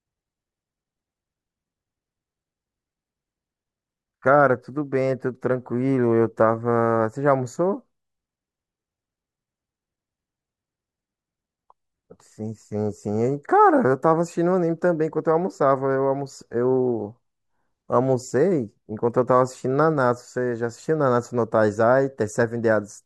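Speech recording; no technical faults can be heard.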